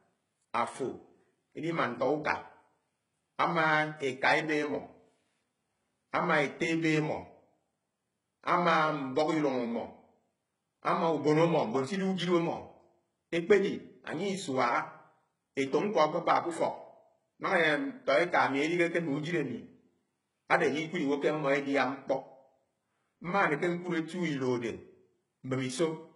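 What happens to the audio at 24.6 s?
At 24.6 s you're hearing the same heavy damage as the rest of the speech: likely HE-AAC compression, consistent with roughly 12 kbps, with copied treble making s sounds gritty and nothing above 11.1 kHz.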